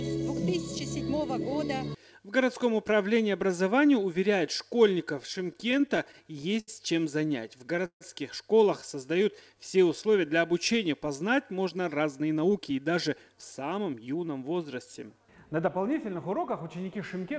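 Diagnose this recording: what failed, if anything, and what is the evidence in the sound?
The trouble is on the network side, landing in the receiver's jitter buffer. You get repeated stalls (stutter) from 5.34 to 6.70 s, with fifteen little hangs adding up to 217 ms, the longest 79 ms. A second burst runs from 7.28 to 8.03 s: seven hangs, 212 ms in total, one stretching to 151 ms and fading as it drags. Packets were arriving late, so the buffer kept running dry and the receiver stretched the last sound until data showed up. Nothing is actually lost, it just limps.

Right after that, from 8.95 to 9.61 s, there's a jitter buffer slow-down. Playback drops to about 92% speed at unchanged pitch, with 59 ms of padding added. Running low, the buffer rebuilt its cushion by repeating single pitch periods over and over, so sounds come out drawn out rather than choppy. It's still a buffer-management stage effect, not a codec issue.

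Then from 11.53 to 14.51 s the opposite happens, a jitter buffer speed-up. Playback runs at about 107% with the pitch unchanged, so it sounds rushed. Late packets presumably arrived in a clump and overfilled the buffer, and the receiver trimmed it back by cutting out one or a few pitch periods at a time, roughly a fifth of a second in all. The call codec itself, which gives nothing above 8 kHz, fits a G.722 path.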